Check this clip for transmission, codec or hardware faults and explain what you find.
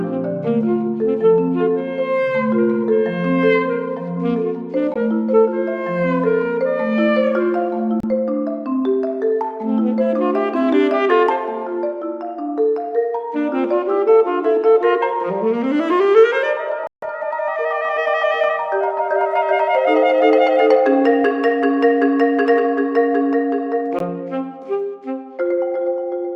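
Four short gaps break the sound, at 4.94–4.96 s, 8.00–8.04 s, 16.87–17.09 s and 23.99–24.02 s, where the audio falls to silence. The third gap is the longest, losing about 150 ms, and the others lose about 15, 30 and 15 ms. These are likely Bluetooth dropouts. Audio packets missed their deadline at the headphones, so the output stayed silent until good packets arrived. Playback then resumes further along, as if it had kept running through the gap.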